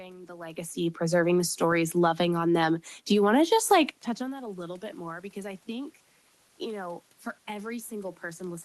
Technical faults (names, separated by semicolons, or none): automatic gain rising